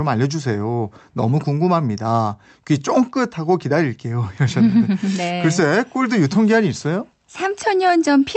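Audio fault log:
No audible faults detected.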